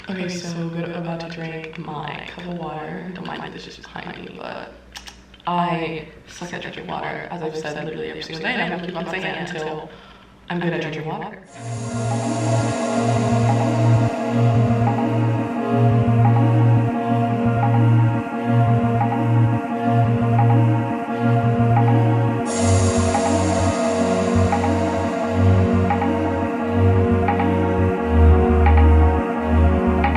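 A doubled audio track runs through the whole clip: every sound is followed about a tenth of a second later by a second, full-band copy a few decibels quieter, roughly 5 dB down. The trailing copy carries no decay or room colouring, so it reads as a flat, slapback-like repeat rather than reverberation. The likely cause is the same signal reaching the mix twice, once directly and once through a slower capture path or an edit holding two copies out of step.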